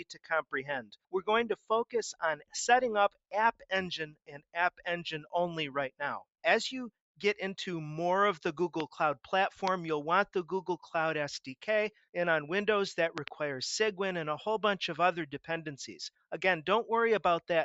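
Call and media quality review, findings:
Noise suppressor applied to music or sounds, whole clip. Speech-tuned suppression treats sustained content as noise. Level pumps by roughly 5 dB. Held sounds and decays sink; attacks pass. Audible flutter and thinning. Component: call noise suppressor.

Sound cut by the noise suppressor at 0.00–0.53 s, 0.82–1.14 s, 2.13–2.54 s and 4.04–4.56 s. Dips reach about 17–18 dB. Steady or fading passages ducked hard, tails cut short. Same suppressor misclassifying sustained energy as noise.

Loud pop at 8.80 s, about 15 dB above the signal. Another at 9.68 s, about 20 dB above. A double pop at 13.18–13.30 s, about 15 dB. Sharp transients over continuing sound. Likely a voltage step from a plug, switch or driver glitch, shaped by downstream circuitry.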